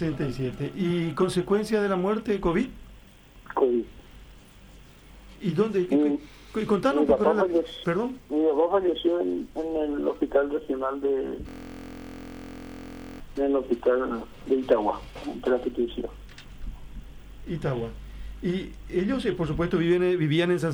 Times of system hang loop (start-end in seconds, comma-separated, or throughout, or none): 11.49-13.20